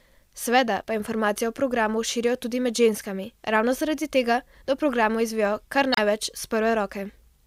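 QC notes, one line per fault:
0.80–0.85 s: damaged data in a compressed stream. A brief glitch breaks the speech where corrupted frames are misread and the decoder loses sync before finding the next header.
5.92–6.00 s: damaged data in a compressed stream. A slightly longer glitch of about 80 ms, from the same corruption and resynchronisation in the encoded data.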